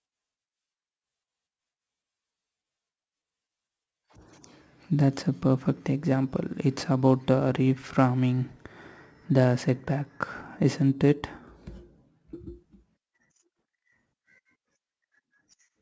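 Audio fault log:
Throughout, aliasing: the speech was resampled down without an anti-alias filter, so sibilant energy above 8 kHz folds back below it as unrelated tones, around 30 dB under the voice, giving a gritty edge and a spectrum packed hard to the band limit. The fold point fits a drop to a 16 kHz rate.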